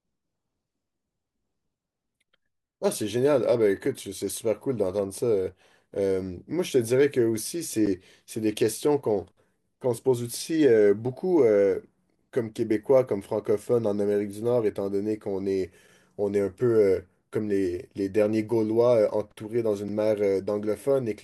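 Short, hard-edged dropouts cut into the speech at 7.86 s, 11.87 s and 19.88 s, each a brief hole of silence lasting about 10, 6.5 and 6 ms respectively. This is a gap between stream segments: their spacing falls on 4-second boundaries, where the timestamps of consecutive segments leave a sliver of time uncovered and the player fills it with silence. No audio is lost; the sound is only pushed later.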